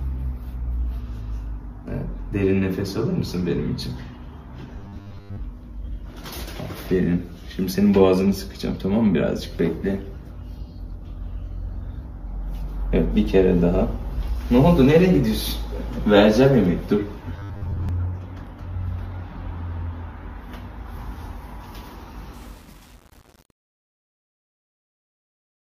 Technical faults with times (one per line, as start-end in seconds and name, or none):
4.79-5.41 robotic sound from repeated short buffers
17.37-17.89 robotic sound from repeated short buffers
22.34-25.69 truncation distortion on a fade